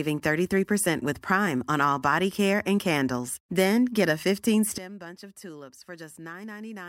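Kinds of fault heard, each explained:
Sudden gain jump: right after "get a", at 4.78 s, the speech and its background noise drop together by about 17 dB in a single step and stay there to the end, likely a digital gain setting applied between adjacent samples without any ramp.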